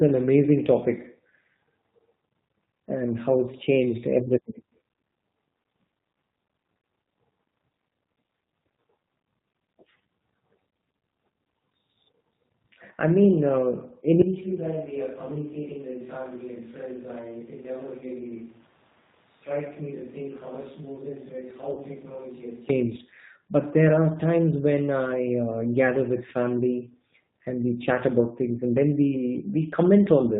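Throughout, the speech sounds band-limited, with nothing above 4 kHz, and plainly rough and slightly synthetic. That is the signature of the G.729 codec at 8 kbit/s, which rebuilds each 10 ms frame from a vocal tract filter, a pitch predictor and a handful of pulses rather than carrying the waveform itself.

At 14.22 s the voice abruptly turns roomy and hollow, loses bass, drops roughly 10 dB and gains a background of room noise sitting well below the speech. It snaps back at 22.69 s. This is likely a switch to a distant microphone, after the close one dropped out and a farther pickup took over.

From 17.99 to 18.04 s the voice smears into a brief buzzy tone that fades and stays weak for a moment afterwards. This is VoIP packet loss concealed by the speech codec. About 20 ms of audio went missing, which fits a single lost packet, and the decoder filled the gap by extending its last pitch and filter at falling gain.

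From 21.73 to 21.82 s the same kind of concealment returns, longer this time. The sound stretches into a fading coloured buzz over a 40 ms gap, which points to two consecutive lost packets, and the voice stays distorted briefly after the stream resumes.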